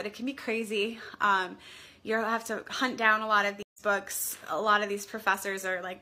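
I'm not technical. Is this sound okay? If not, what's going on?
No. At about 3.63 seconds the sound drops out for a split second, roughly an eighth of a second of silence, and when it comes back at about 3.82 seconds it has jumped slightly ahead, skipping a small piece. This is a stream reconnect: the connection briefly broke, the player went quiet, reconnected, and picked up the live stream where it had moved on to, so the bit that played during the gap is lost.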